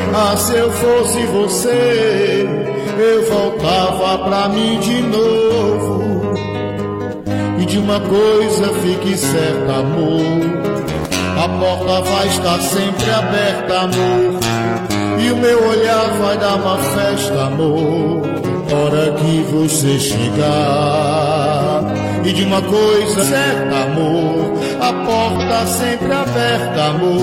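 Five short bursts of damaged data in the compressed stream, at 6.32–6.38, 18.67–18.73, 20.62–20.68, 23.18–23.24 and 25.36–25.42 s. Each time, corrupted bytes throw the decoder off its frames until it resyncs, leaving a quick glitch of about 60 ms.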